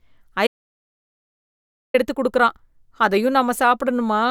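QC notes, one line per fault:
0.47 to 1.94 s, audio dropout to silence: speech cuts off mid-flow into about 1.5 s of silence with no room tone, likely a lost input, resuming at "எடுத்து குடுக்குறான்".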